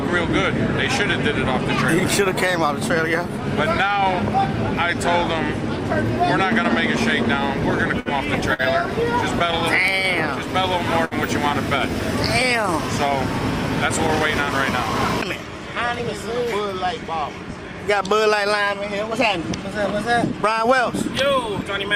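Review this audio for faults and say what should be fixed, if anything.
A burst of packet loss occurs at 8.00 to 8.09 s and 11.05 to 11.14 s. Roughly 60 ms of audio was lost each time, and the receiver filled about 57 ms and 64 ms by extending the last sound while fading it. This shows as a smeared, decaying band on a spectrogram, followed by an abrupt jump. More network headroom or forward error correction would prevent this.

A short stall from a late packet occurs at 8.54 to 8.62 s. The jitter buffer emptied, so the last sound was stretched about 52 ms until the packet arrived. Nothing is missing, but latency grew by about 52 ms. The waveform shows a repeated, slightly dipping stretch. A deeper or adaptive jitter buffer would absorb the delay.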